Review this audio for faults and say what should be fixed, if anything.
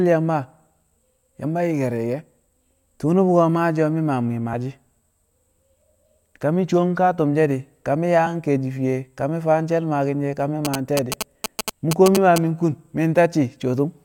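Damaged data in the compressed stream produces four very short glitches, at 1.43 s, 4.52 s, 8.26 s (between "she̱ di̱ ka mi̱" and "ke̱e̱shi̱ fiye ka") and 12.16 s. At each one, corrupted bytes make the decoder misread a frame, lose sync and jump to the next frame header. The result is an isolated glitch. A digital dropout would leave silence or a plain gap instead. Re-fetch or re-encode the file from an intact source, and verify it with checksums, to prevent this.

GSM signalling bursts run from 10.65 s to 12.38 s, starting just after "she̱ ka mi̱". A nearby 2G phone's radio bursts are rectified in the audio circuit and heard as a galloping dit-dit-dit of short buzzes at about 217 Hz, only a little below the speech. Mains hum is a steady tone at 50 or 60 Hz. This interference is a higher, rhythmic, stuttering pattern. Keeping phones away from the microphone, cables and interface during recording prevents it.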